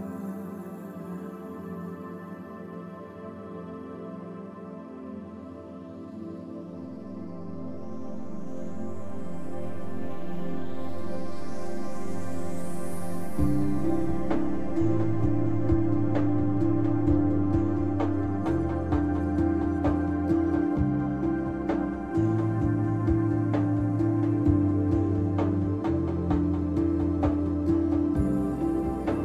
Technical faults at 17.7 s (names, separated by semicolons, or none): none